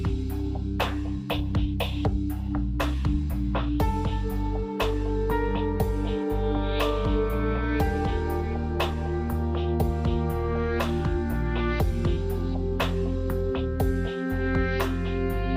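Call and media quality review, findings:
Nothing to flag here, no audible faults turned up anywhere in the clip.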